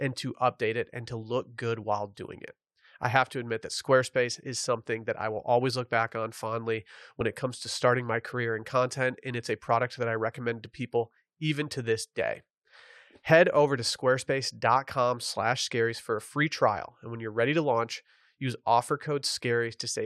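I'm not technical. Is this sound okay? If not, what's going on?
No. Compressed frames skipped at 7.20 s, between "look back on fondly" and "it comes to starting". One 21.3 ms chunk of the compressed speech was missing or rejected as damaged, so the speech jumps ahead about that much.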